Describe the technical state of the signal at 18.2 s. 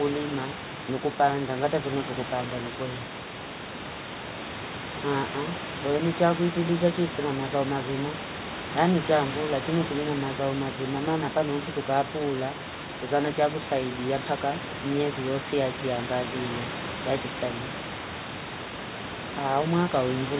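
At 18.2 s the signal is intact, with only the room's background noise sitting about 10 dB below the speech and the call path's band limit leaving nothing above 4 kHz.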